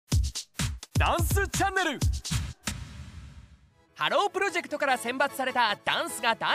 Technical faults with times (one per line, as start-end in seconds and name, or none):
2.30-2.72 frames out of order